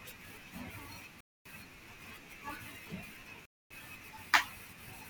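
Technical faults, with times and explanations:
1.21–1.46 s and 3.46–3.71 s, gap between chunks: the speech stops abruptly for 250 ms with hard edges because silence is inserted at each join between 2 s chunks.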